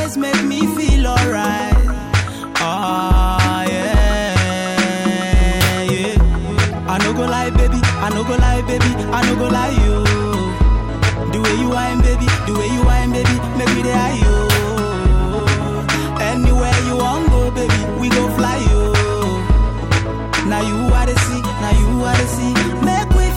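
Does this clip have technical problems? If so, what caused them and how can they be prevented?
Yes. A corrupt frame was decoded at 6.71 to 6.75 s: bit errors in a single compressed frame were played rather than rejected, so misread gains and codes put energy at wrong frequencies, causing a brief chirp, squeak, blip or burst of noise peaking around -10 dBFS. Checksums with error concealment would discard such frames.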